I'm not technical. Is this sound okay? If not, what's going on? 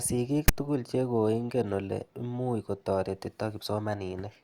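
No. At 0.48 s there's a brief harsh rasp. That's file tags played as audio: text stored in the file got read as sound.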